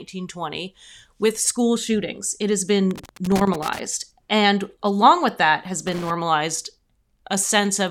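Loose connector crackle breaks into this speech clip twice, from 2.91 to 3.79 s and again from 5.87 to 6.10 s. Each burst is an irregular scratching crackle. It comes from a worn or dirty contact somewhere in the cable or jack that keeps making and breaking as it shifts. That chops the signal into rapid fragments, and any DC sitting on the line turns each break into a small pop. The first burst runs close to a second, and the second is a brief quarter-second flare.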